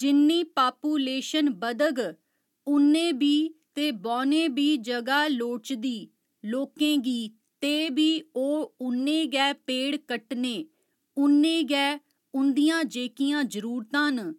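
No technical faults turn up at any point in the clip, so there is nothing to describe in time order.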